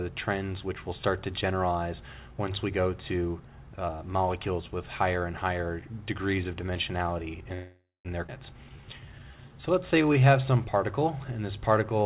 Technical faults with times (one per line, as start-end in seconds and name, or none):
7.54-8.07 call audio freeze
8.27-8.30 skip ahead
8.57-11.00 jitter buffer slow-down